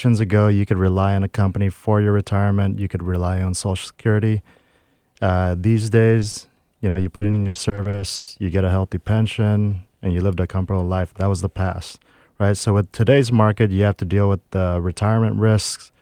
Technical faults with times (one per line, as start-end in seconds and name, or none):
6.19-6.35 short concealed packet loss
6.89-8.29 repeated packet loss (robotic sound)